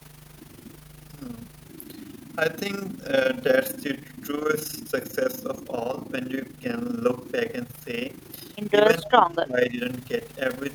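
Overlap-add ripple runs through the whole clip. Frames were rejoined with uneven gain, so the level pulses around 30 Hz, by about 11 dB, giving a rough, robotic flutter.

From 9.03 to 9.78 s, the speech dips and breaks up for about half a second in total, falling by roughly 15 dB at worst. This is likely speech suppressed in double talk, with the canceller ducking the talker while the far side spoke.

From 9.05 to 9.09 s, a faint copy of the voice returns 263 ms late, about 20 dB down. It is likely an echo leak through the loudspeaker path.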